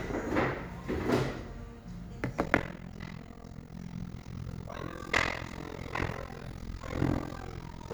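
From 2.44 s to the end of the clip at 7.94 s, the audio carries overlap-add ripple. The signal was split into windowed frames and rebuilt with an overlap that does not sum to a constant gain, so the level dips and recovers once per frame. The swing is about 60 dB deep at a rate of around 40 Hz, which turns the sound into a harsh, fast, robotic tremolo that chops it nearly to silence on every cycle.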